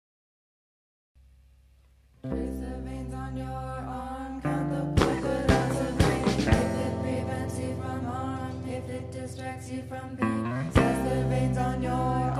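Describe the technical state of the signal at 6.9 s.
At 6.9 s the signal is intact, with no dropout, clipping, glitch or other fault audible at that moment.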